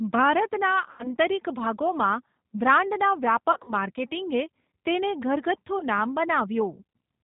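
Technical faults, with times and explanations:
Throughout: G.729 codec. The speech is carried at 8 kbit/s by the G.729A variant, rebuilt from a vocal tract filter, a pitch predictor and a handful of pulses per frame, so it sounds plainly rough and slightly synthetic. On a spectrogram the energy stops abruptly at 4 kHz, with nothing above. The harmonics look smeared and grainy rather than cleanly striated, and the waveform loses fine detail between pitch pulses.
0.91–1.08 s, 3.52–3.73 s and 5.79–5.84 s: VoIP packet loss concealed by the speech codec. The decoder filled missing audio by repeating its last pitch and filter at falling gain. It covered about 80 ms in the first event, which fits four 20 ms packets. In the second, 100 ms was lost across 160 ms in runs of up to 40 ms. The third was a single 20 ms gap. Each gap sounds like a brief buzzy tone or coloured noise that fades. A spectrogram shows a flat, repeated pattern dimming, and the waveform shows a shrinking periodic envelope that recovers gradually.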